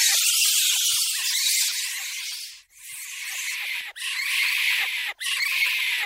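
No technical faults occur at any point in the audio.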